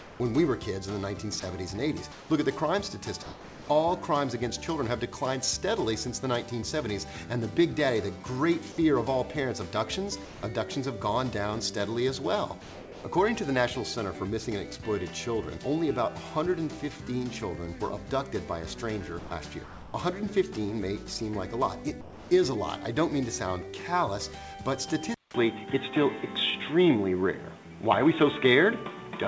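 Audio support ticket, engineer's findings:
Sound chopped by the voice detector, 0.0–3.68 s and 19.19–19.94 s. Sender-side VAD likely toggling transmit repeatedly; about 0.86 s and 0.42 s of sound swapped for comfort noise. Waveform shows gated gaps.

Sound dropped by the voice detector at 8.72–8.78 s, 10.25–10.43 s, 12.62–13.04 s and 22.01–22.31 s. Likely VAD treating quiet sound as background; gaps of 60, 180, 420 and 300 ms filled with steady comfort noise. Spectrogram shows signal detail abruptly replaced by steady noise, then resuming.

Input switched to a poorer device at 25.14 s, to end. Likely failover to a narrower mic or headset call profile. 200 ms silence at switch, level shifts about 5 dB, nothing above 3.8 kHz versus the 8 kHz G.722 band before. New noise floor about 30 dB below signal. Spectrogram shows a hard top-edge drop and a flat gap at the switch.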